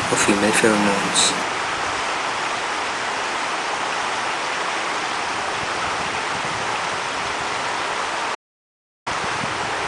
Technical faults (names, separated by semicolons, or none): audio dropout to silence